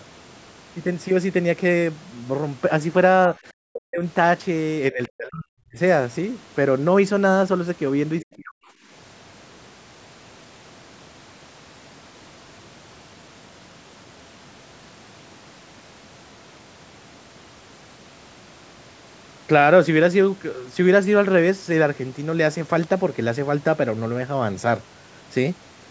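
At 3.68–4.03 s, 4.92–5.78 s and 8.21–8.6 s the speech dips by up to about 40 dB, likely speech suppressed in double talk. The echo canceller turns down the near talker along with the echo, so the level falls.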